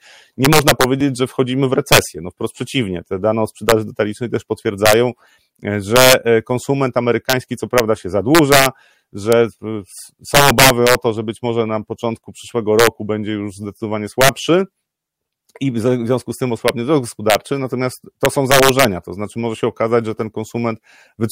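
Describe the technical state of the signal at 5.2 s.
At 5.2 s the signal is affected by integer overflow, which runs through the whole clip. The gain stage pushes the speech about 7 dB beyond the largest value the integer format can hold. Instead of being limited, those sample values wrap around to the opposite sign, jumping across the full range. Only around half a percent of samples go over, but each one becomes a harsh, violent crack on loud syllables, far sharper than ordinary clipping.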